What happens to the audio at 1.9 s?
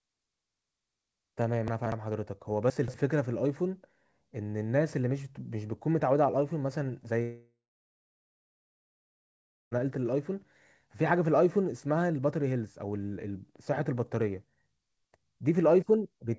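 Chunks out of order, 1.68 to 1.92 s: a 60 ms chunk plays three chunks late, sounding jumbled, with abrupt waveform steps at the joins.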